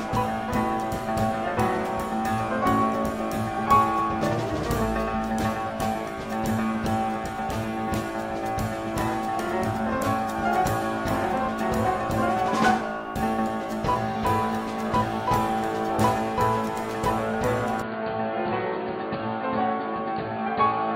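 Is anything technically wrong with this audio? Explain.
Yes. From 17.82 s to the end, the input likely switched to a poorer device. Its narrower band cuts everything above 4.7 kHz, so the sound turns dull, drops a few decibels, and gains a faint new noise floor, with no gap at the switch.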